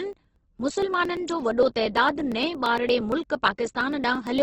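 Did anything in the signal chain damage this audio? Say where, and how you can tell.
Yes. At the codec stage, the speech sounds grainy and rough, with tones smeared into noise, and nothing exists above 8.2 kHz. A spectrogram shows a hard ceiling there and noise-filled bands below. This is likely heavy Opus compression in music (CELT) mode, consistent with a very low bitrate near 12 kbps.

At the driver or buffer stage, periodic USB or driver dropouts cause evenly spaced ticks every 0.115 s from 0.13 s to 4.38 s, about forty in all. Around 10 ms is skipped each time, so the waveform shows abrupt joins with no silent gap, and the spectrogram shows regular vertical broadband lines.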